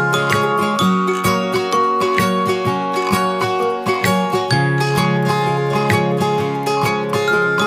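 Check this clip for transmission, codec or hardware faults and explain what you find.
Nothing stood out on listening to this clip.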